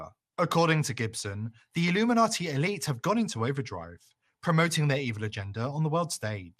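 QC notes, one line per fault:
Throughout: MP2 compression, plainly audible on the speech. The top end is dull, and upper bands flicker in and out. A gurgling, granular grain coats what remains. The likely cause is MPEG Layer II coding starved of bits, which fits an 80 kbps rate.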